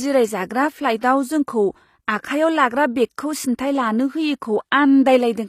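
Throughout the speech, s sounds come out gritty and lispy, and the treble stops at 14.9 kHz. This is likely HE-AAC compression, which sounds like roughly 24 kbps. The upper band is rebuilt from copied lower bands, so its harmonics misalign.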